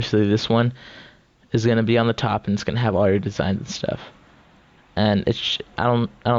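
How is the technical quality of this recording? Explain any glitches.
The recording has one audible fault that runs through the whole clip, heard over the call path's roughly 8 kHz bandwidth.

Gain pumping, throughout: the gain swings by around 5 dB, flattening the dynamics. The likely cause is microphone gain set far too high, with a fast limiter or compressor clamping down on each peak.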